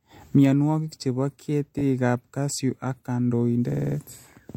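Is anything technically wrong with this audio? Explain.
Yes. From 3.71 to 3.96 s there are repeated frames. A 39.2 ms block plays five extra times, adding about 0.25 s as a stutter.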